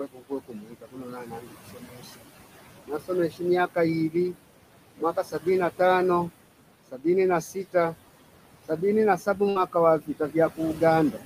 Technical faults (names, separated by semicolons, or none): noise suppressor artifacts; speech cut by the noise suppressor; burst of packet loss